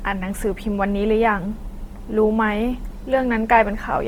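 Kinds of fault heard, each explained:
Opus compression: There's a grainy, rough, noise-filled texture across the whole speech clip, and it's plainly audible. The likely cause is Opus running in its CELT music mode at a low rate, something like 24 kbps. At that budget the encoder keeps each band's energy but fills what it can't afford with folded copies of lower bands or with noise, so detail turns hashy rather than swirly. Bandwidth stays full, reaching up to about 20.2 kHz.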